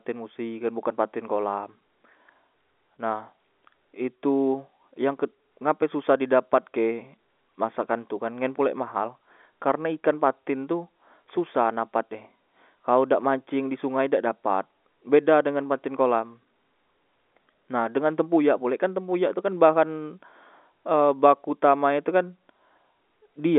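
Nothing in this speech stood out as a fault on listening, with the sound heard through an ordinary telephone band.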